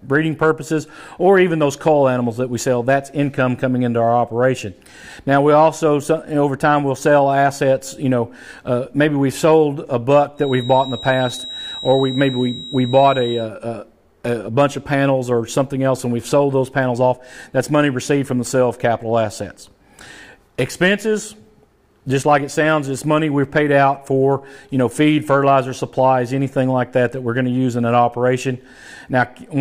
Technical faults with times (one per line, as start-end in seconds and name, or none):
10.34-13.50 feedback whistle